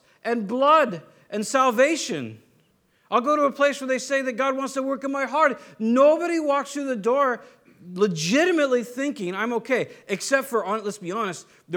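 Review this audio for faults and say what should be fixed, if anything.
No faults found; nothing needs fixing.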